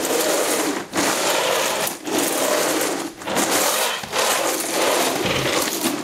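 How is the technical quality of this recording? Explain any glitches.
The technical quality suffers from gain pumping that runs through the whole recording. The likely cause is input gain set far too high for the microphone, with a fast limiter or compressor clamping the level back down whenever something loud arrives. Each loud event drags the background down with it, and in the gaps the background swells back up, a swing of around 20 dB. Loud and quiet moments end up squeezed close together, giving a breathing, squashed sound.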